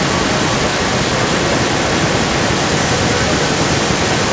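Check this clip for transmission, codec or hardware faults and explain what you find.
An echo leak runs through the whole clip. A second copy of the speech trails the direct speech by about 0.32 s. It is only a little quieter than the original, about 5 dB down. It sounds like a delayed, overlapping repeat of the speech. The likely cause is a loudspeaker on the far side of the call. That end's echo canceller did not remove the pickup fully, and the leftover was sent back. The call's microphone processing trims the deepest bass, and nothing sits above 8 kHz.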